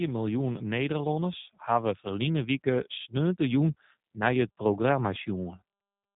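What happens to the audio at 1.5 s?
At 1.5 s, as throughout the clip, the speech carries G.729 codec damage: it is rebuilt from a vocal-tract filter, pitch predictor and sparse pulses, which fits an 8 kbit/s codec, and nothing passes above 3.8 kHz. Unlike a plain low-pass filter, it also sounds plainly rough and synthetic.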